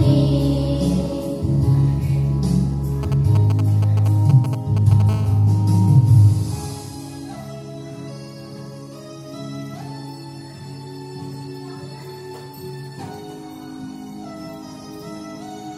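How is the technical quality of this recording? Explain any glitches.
The recording is marred by interference from a nearby 2G mobile phone, in two stages.

From 3.03 to 5.02 s there are GSM signalling bursts. A phone exchanging short control transmissions with the network sends brief groups of radio pulses, and the audio circuit rectifies them into the signal path. The result is a galloping dit-dit-dit of short buzzes at about 217 Hz, quite prominent, only around 10 dB below the wanted sound.

From 5.09 to 6.89 s the phone is in a call and transmitting continuously in bursts 217 times a second, giving GSM phone buzz. The circuit again demodulates those pulses, now producing a steady, hard, raspy 217 Hz buzz rich in harmonics that bears no relation to the recorded sound. It sits lower than the earlier bursts, about 24 dB below the signal.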